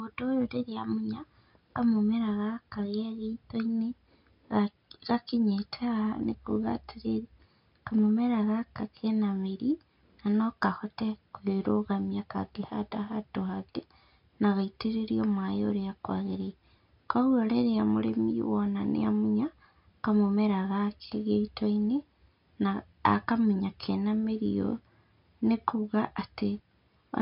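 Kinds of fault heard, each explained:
Nothing stood out on listening to the speech here.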